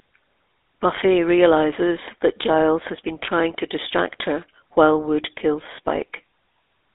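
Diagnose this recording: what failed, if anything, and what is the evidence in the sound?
Codec stage, whole clip: buzzy, gravelly GSM full-rate codec roughness in a 300 Hz to 3.7 kHz band, sounding like 13 kbps pulse-driven vocal-tract modelling.

Network stage: lost GSM frames, 0.96 to 0.99 s, just before "realizes that". A brief metallic ring as the decoder repeats the last good frame, which points to one dropped frame.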